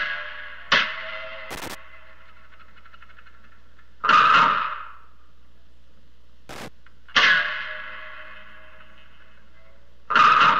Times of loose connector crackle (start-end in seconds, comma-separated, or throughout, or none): 1.51-1.75, 6.49-6.68